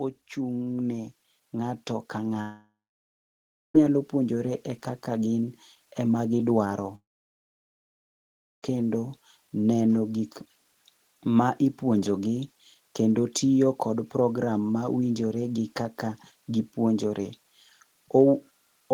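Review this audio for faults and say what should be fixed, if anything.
Automatic gain rising: the gain control judged the input too quiet and kept raising its gain from 0.35 s to the end, so speech and background swell together. Fix it by setting a proper input level and capping the maximum gain the control may apply.

Long network dropout, twice: audio likely stopped arriving at 2.41 to 3.75 s and 6.95 to 8.63 s. Each time, a brief fading continuation gives way to silence, about 0.96 s and 1.59 s long, and the missing audio never returns. Prevent it with a more stable connection, or with a larger jitter buffer and retransmission so that gaps can be recovered.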